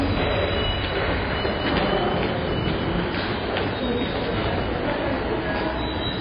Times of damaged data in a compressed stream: none

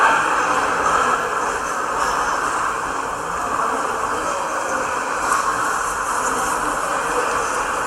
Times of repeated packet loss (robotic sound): none

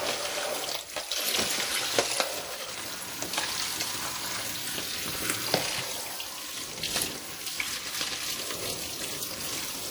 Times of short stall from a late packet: none

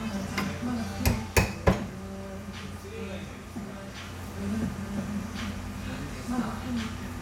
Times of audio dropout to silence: none

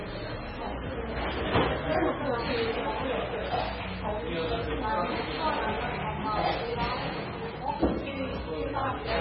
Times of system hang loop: none

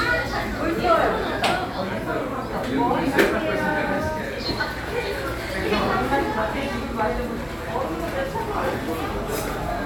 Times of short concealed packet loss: none

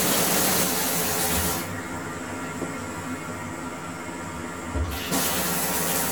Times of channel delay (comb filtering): 0.64-6.11

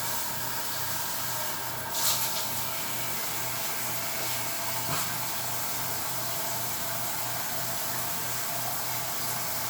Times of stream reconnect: none

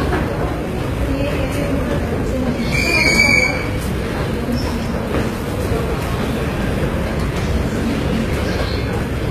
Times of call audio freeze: none

